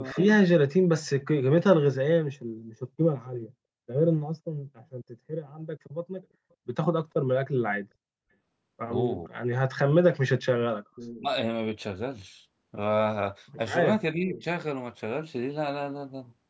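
At 0.13–0.17 s the speech dips by about 10 dB for a brief moment, likely speech suppressed in double talk, where the echo canceller attenuates the near talker while the far side is also speaking. From 0.17 to 0.31 s a copy of the voice follows 450 ms behind, about 10 dB down, likely an echo leak from a loudspeaker echo the canceller failed to remove. The same echo returns at 10.95–11.21 s, about 20 dB down, and the speech then drops sharply, about 30 dB, between 11.17 and 11.28 s. At 14.14–14.45 s the speech is held down about 20 dB for roughly a third of a second, and a weak echo, about 25 dB down, appears at 14.37–14.44 s. The band stops at 8 kHz, consistent with the call microphone processing.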